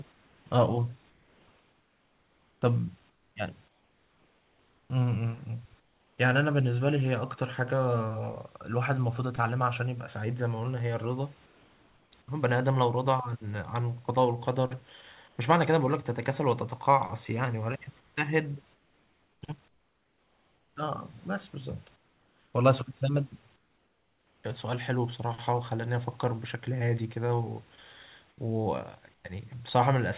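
Comfort noise in place of the background fills the pauses at 0.12–4.9, 5.8–6.18, 11.46–12.12, 15.28–15.38, 18.0–20.76, 21.96–22.54, 23.56–24.44 and 28.3–29.24 s. The likely cause is discontinuous transmission: the room's background gives way to steady, featureless hiss, up to about 8 dB quieter. On a spectrogram these gaps show as smooth, textureless bands that stop at 4 kHz.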